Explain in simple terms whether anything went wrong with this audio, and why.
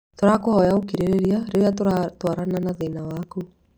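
Something did go wrong. From about 0.11 s right through to 3.71 s, the speech is peppered with regular little ticks, one every 0.06 s, roughly seventeen a second. That's the classic sign of periodic USB or driver dropouts. Something in the background keeps blocking the audio connection on a fixed timer, and each time a few milliseconds of sound simply get skipped. The jumps show up as clicks whenever there's sound playing.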